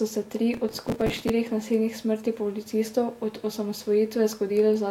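From 0.54 to 1.29 s, just after "se tri" and ending before "nasilnih smrti", the processor falls behind and misses its deadlines on a short run of small audio buffers, which points to buffers of around 5 ms, a few dozen of them. Each late buffer is filled by repeating a stale scrap of earlier audio with abrupt edges, so a gritty, tearing processor overload crackle rides on the speech and stops once the load eases.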